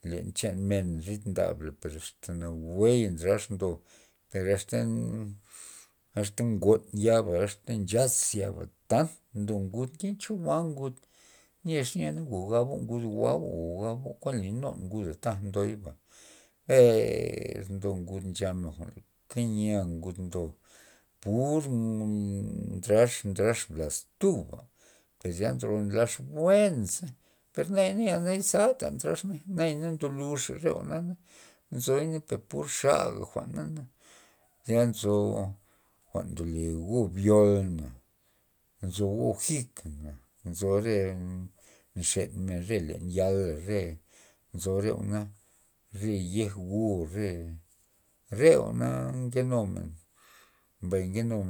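Nothing in this speech recording trips up the ear, and there's no technical fault to point to anywhere along the way.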